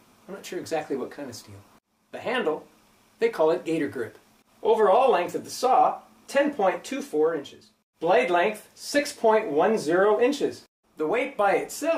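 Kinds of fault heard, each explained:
Nothing stood out on listening to this clip.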